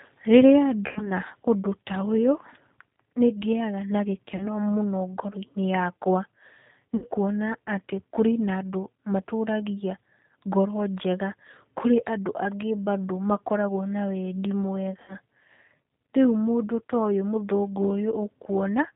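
Speech squeezed through the G.729 codec, and the damage is easy to hear: nothing above 4 kHz survives, and the low-rate filter-and-pulse rebuild gives the voice a rough, slightly synthetic edge, which fits the 8 kbit/s G.729A variant. There's also VoIP packet loss concealed by the speech codec at 0.87–1.08 s, 4.37–4.48 s, 6.96–7.05 s and 15.02–15.13 s. Roughly 90, 30, 60 and 60 ms of audio went missing there, and the decoder smeared its last pitch and filter into a fading buzzy tone or coloured noise, with the voice staying weak briefly afterward.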